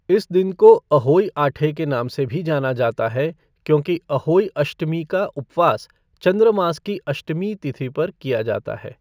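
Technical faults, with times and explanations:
Throughout: imaging from linear upsampling. The speech sounds like it was brought up from a 16 kHz original to a 44.1 kHz rate by straight-line interpolation between samples, which filters poorly. The top of the original band, just under 8 kHz, is dulled. A faint mirrored copy of the spectrum sits from 8 kHz to 16 kHz, around 40 dB below the signal, adding a light metallic shimmer to sibilants.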